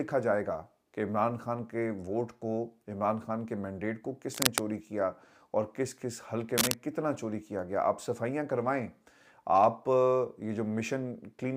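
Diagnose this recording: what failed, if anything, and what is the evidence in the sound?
Cable scratch noise points to a failure in the analogue wiring stage. Dense, ragged bursts of scratching cover the sound from 4.32 to 4.61 s, about level with it, and from 6.58 to 6.74 s, roughly 5 dB above it. The likely cause is a worn connector or lead whose contact resistance fluctuated as it moved.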